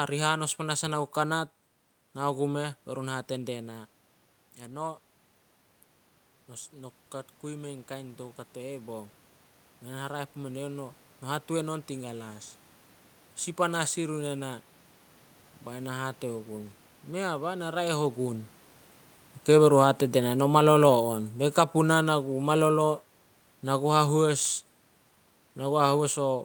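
From 6.48 to 12.51 s, the automatic gain rises. The input level has dropped by about 11 dB, so the gain control treats the signal as too quiet. It pushes its gain up slowly, by about 7 dB over roughly six seconds. The speech and the room noise swell together. The background grows as much as the voice. That shared lift points to the processing, not to the talker.

From 19.49 to 26.28 s, the automatic gain falls. This comes soon after the talker moves, near 18 s, and the controller now reads the input as too loud, or its background noise as too strong. It backs its gain off gradually by about 8 dB. The speech starts loud and then sinks steadily. The room noise sinks right along with it. The level keeps drifting down almost to the end of the clip.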